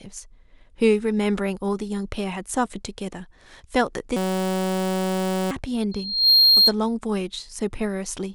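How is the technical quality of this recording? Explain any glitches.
The recording has two clear glitches in the speech.

From 4.17 to 5.51 s, a system hang loop repeats one 5.33 ms slice, fitting a 256-sample buffer, as a 188 Hz buzz. On a waveform it shows as an identical repeating pattern; on a spectrogram, as harmonic stripes.

From 5.91 to 6.73 s, a loudspeaker feedback squeal builds over roughly 0.4 s into a 4.2 kHz tone, about 10 dB above the speech. It appears as one bright horizontal line.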